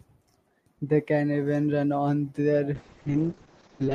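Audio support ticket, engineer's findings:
Call bitrate drop, 2.75 s to end, after "can even run on": speech rough, watery, top cut from 20 kHz to 8 kHz. Bandwidth estimate fell and starved the encoder, consistent with about 48 to 6 kbps. Continuous, no gaps, unlike packet loss.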